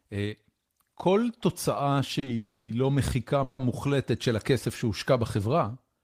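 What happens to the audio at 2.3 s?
Two short stalls from late packets come first, at 2.19 to 2.24 s and 2.24 to 2.28 s. The jitter buffer ran dry, so the receiver held the last sound for 30 ms and then 20 ms before resuming. The spectrogram shows brief frozen, smeared bands with a slight buzz or dip.

A call audio freeze follows from 2.36 to 2.70 s, likely from packets held up in transit. For 320 ms the last sound is stretched into a fading buzz or hiss ending in about 10 ms of silence. Nothing is lost. A flat horizontal smear then a dropout appears on the spectrogram.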